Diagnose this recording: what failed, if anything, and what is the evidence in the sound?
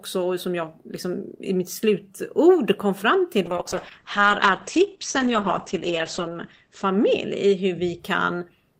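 Call bitrate drop at the codec, 3.47 to 8.05 s: speech goes coarse and muffled at 9 kbps instead of 32, with bandwidth cut from 20 kHz to 8 kHz, and without packet-loss dropouts.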